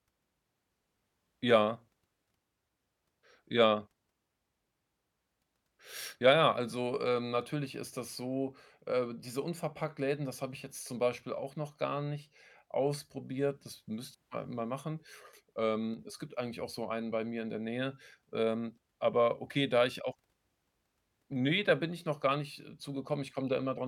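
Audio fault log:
15.94–15.99 s, one channel drops out: right before "es gibt eigentlich auch" the speech takes a sudden, very short dip of about 6 dB lasting roughly 50 ms and then snaps straight back to full level. The likely cause is one side of a stereo pair briefly cutting out. Once the pair is folded to mono, the content shared by both sides loses half its contribution, so the whole sound drops for that instant rather than fading.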